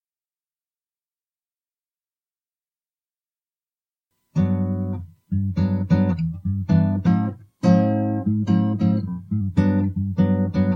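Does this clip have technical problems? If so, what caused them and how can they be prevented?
Yes. From 7.07 to 9.41 s there is a wrong sample rate fault: the sound runs 1.09 times fast and about 1.5 semitones sharp, which fits 44.1 kHz audio played at 48 kHz without conversion. Unlike a pitch shift or time-stretch, tempo and pitch rise together by the same ratio. To prevent it, resample to the device's rate or play each segment at its recorded rate.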